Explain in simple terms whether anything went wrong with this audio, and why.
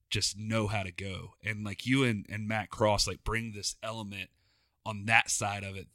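Nothing went wrong with this audio; the speech comes through with no fault to be heard.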